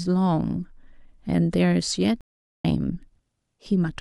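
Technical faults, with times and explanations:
2.21–2.65 s, stream reconnect: the connection dropped, the player lost its feed and fell silent for about 0.43 s, then reconnected and started a fresh decoder partway through the stream. Because the live stream kept running during the gap, the speech resumes roughly 0.4 s further on rather than where it broke off, so a stretch of speech is missing. The new decoder's first frame fades in, softening the restart.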